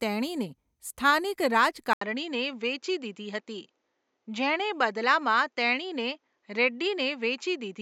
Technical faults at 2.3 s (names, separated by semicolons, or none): input switched to a poorer device